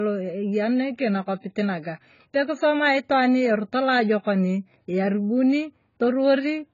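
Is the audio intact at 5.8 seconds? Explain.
No. Channel delay (comb filtering) runs through the whole clip, including 5.8 seconds. One channel arrives a few samples late, a fraction of a millisecond, which fits a 4-sample offset, and the two are summed to mono. Content common to both cancels at evenly spaced frequencies, with the first notch around 7 kHz. Because the delay is just past the point where it would only dull the top, the speech takes on a hollow, phasey colour from fixed notches.

AAC compression damage is also present throughout, heavy at 5.8 seconds as everywhere else. Nothing is left above 7 kHz, so the speech sounds dull and band-limited, and the spectrum is smeared with the warbling, fizzy texture of coarse quantisation, most noticeable on sustained sounds and sibilants. This is likely AAC-LC at a low bitrate, which fits around 16 kbps, where the encoder lowers its cut-off and drops or fills whole bands.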